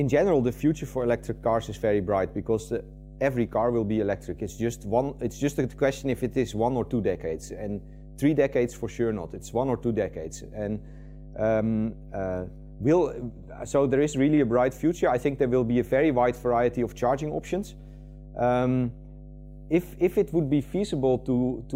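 Mains hum runs through the whole recording as a steady low tone at 50 Hz, sitting about 20 dB below the wanted sound. Power-line energy has leaked into the signal path, most plausibly through a ground loop or a nearby transformer's magnetic field.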